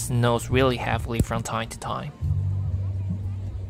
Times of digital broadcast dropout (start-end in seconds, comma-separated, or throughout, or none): none